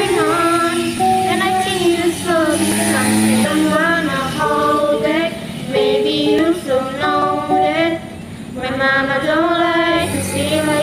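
At 0.98 s and again at 2.72 s the audio jumps abruptly, with no gap of silence. Each skip drops roughly 20 ms of material, most likely a dropped buffer (overrun), where the capture side failed to read a block before the hardware overwrote it and the surrounding audio was spliced end to end.

From 3.44 to 3.46 s a short glitch cuts across the sound. This is damaged data in a compressed stream: the decoder hit corrupted frames, lost sync and skipped forward to the next valid frame header.

The same skip pattern returns at 6.39 s and 7.22 s, again losing about 20 ms each. At 8.22 s the jump is larger, around 50 ms.

At 10.13 s a second brief glitch marks another stretch of corrupted compressed data.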